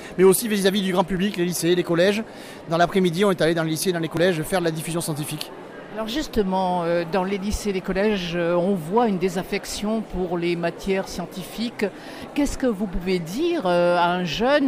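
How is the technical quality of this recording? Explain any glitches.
The recording has four brief skips. Each is heard as a sudden jump in the sound, at 1.17, 4.17, 7.33 and 9.03 seconds. These are most likely dropped buffers from an overrun. The software fell behind, and the hardware overwrote samples before they were read. The lost piece simply vanishes, and the two edges butt together with no gap. Roughly 30 ms goes missing at the first two points, and around 10 ms and 20 ms at the later two.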